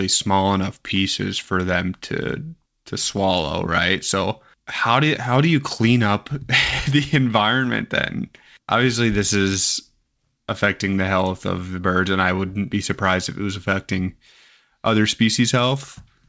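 The speech shows no technical fault: it has passed through a call path, and the band limit at 8 kHz, with nothing above it, fits wideband G.722 coding at 64 kbps.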